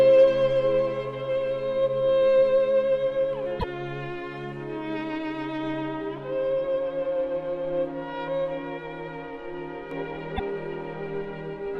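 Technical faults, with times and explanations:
3.57 to 3.64 s and 10.36 to 10.40 s, damaged data in a compressed stream: two short disruptions, about 76 ms and then about 42 ms long, where part of the coded stream is wrong. The decoder can't read the frames there properly, loses its footing and has to hunt for the next valid frame header before it can carry on, which breaks the audio for that moment rather than just colouring it.
9.91 s to the end, doubled audio track: from here a second full-band copy of the same audio runs about 1.5 s behind the original, at roughly the same level. It cuts in abruptly, with no decay or room colour, so it's not an echo but a straight duplicate. The likely cause is the sound being picked up a second time through a slower path, or an edit leaving two copies out of step.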